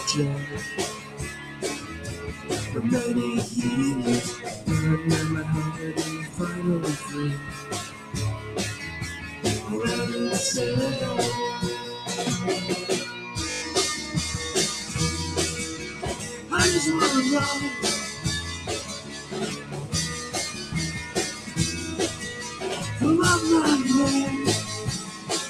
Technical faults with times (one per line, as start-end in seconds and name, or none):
0.00-25.50 noise suppressor applied to music or sounds
0.94-2.49 sound cut by the noise suppressor
5.72-9.44 sound cut by the noise suppressor
13.50-13.62 system hang loop
15.84-16.52 sound cut by the noise suppressor
18.14-22.60 sound cut by the noise suppressor
25.02-25.29 sound cut by the noise suppressor